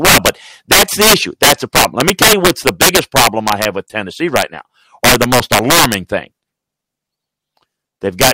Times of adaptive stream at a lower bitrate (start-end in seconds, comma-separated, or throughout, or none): none